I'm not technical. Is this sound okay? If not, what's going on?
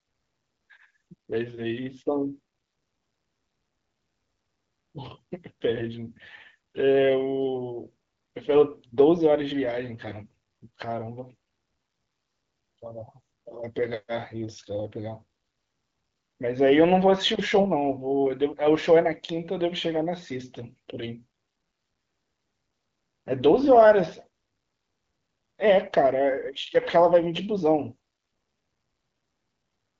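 No. The AMR bit errors come from a weak phone link that flipped some of the less important bits, which garbles the sound-building details. From 10.04 to 10.16 s and again from 17.55 to 17.67 s, the speech briefly turns hoarse, scratchy and gargly on an HD Voice call.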